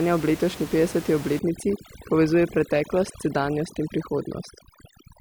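From 1.39 s, just after "ob letošnji petdeseti", to the end, overdone noise removal sets in. A noise reducer pushed too hard cuts frequency bands that sit near its noise estimate, taking quiet parts of the speech with them, so the background drops and breaks up into twinkling specks.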